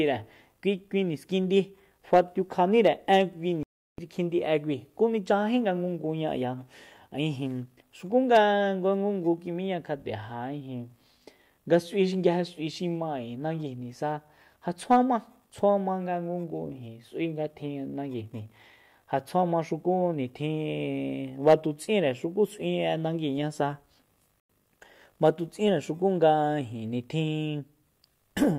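A digital broadcast dropout cuts the speech at 3.63 s, leaving silence until 3.99 s. The receiver stopped getting frames that passed their checksum and muted its output until valid data returned. The hole of about 352 ms fits roughly eleven lost frames. A second, shorter dropout at 24.40 to 24.50 s mutes about 96 ms. In both, the speech sent during the gap never arrives, and the programme simply resumes further on.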